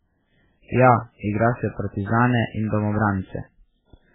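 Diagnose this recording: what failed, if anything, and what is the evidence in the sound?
Dull, watery speech throughout, with nothing above 3.7 kHz; the codec stage likely failed through MP3 compression at a very low bitrate, near 8 kbps, cutting treble and dropping weak detail.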